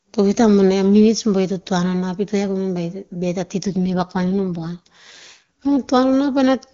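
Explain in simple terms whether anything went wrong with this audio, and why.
An AMR rate drop at 3.65 s, after "ta ti to", had the network squeeze the speech into fewer bits, making it rougher and more synthetic until 5.76 s.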